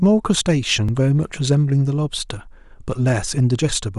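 At 0.89 s the speech jumps forward, with roughly 5 ms of sound missing. This is likely a dropped buffer (overrun), where samples were overwritten before being read and the two sides spliced together. Unlike a dropout, there is no silent gap.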